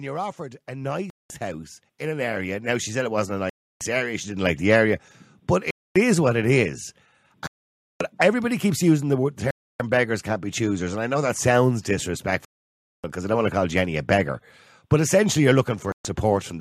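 From 0.36 s to about 4.5 s there's automatic gain rising: the gain control decides the input is too quiet and slowly pushes it up by about 13 dB, so the speech and the background swell together over those four seconds.

Overlapping that, Bluetooth stalls start, seven of them: 1.10, 3.50, 5.71 (between "the area but" and "is what it is"), 7.47, 9.51 (after "everybody keeps using the", before "beggars can't be choosers"), 12.45 (before "because I don't want") and 15.92 s. Each cuts to silence for 0.13 to 0.59 s, then resumes, likely because interference delayed packets and the headphone buffer ran dry.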